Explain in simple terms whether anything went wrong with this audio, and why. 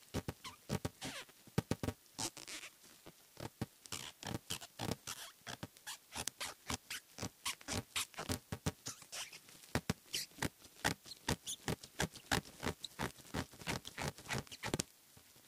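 A steady buzz runs through the whole clip. This is a filter restarted on every block. The filter forgets its state each time and starts cold, leaving a tiny tick. The ticks come 345 times a second, which fits a 128-sample block. They get louder when the sound does.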